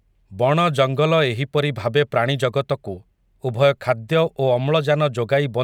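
No technical faults can be heard anywhere in this recording.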